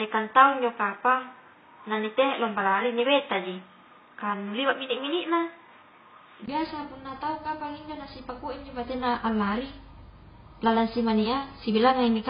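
The recording likely began on a poorer input device, and the system switched to a better one at about 6.48 s. Until then the speech is dull and boxy with nothing above 3.8 kHz. A 20 ms silence marks the switch, after which the sound clears on "biasa punna tau kapang" at about the same level. The poorer device adds background noise far below the speech. Throughout the clip, the speech was likely encoded as AAC compression at a very low bitrate, which fits around 16 kbps. The codec cuts everything above 5 kHz and quantises the remaining bands coarsely, leaving heavy codec damage: a dull, smeared tone with warbling and fizzy texture on sustained sounds and sibilants.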